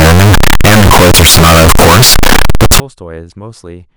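From 0.0 to 2.8 s the speech is blasted into a harsh, nearly square buzz at an almost fixed, high level, with background noise as loud as the talker though pitch survives. This is float read as integer, likely 32-bit float samples decoded as 32-bit integers.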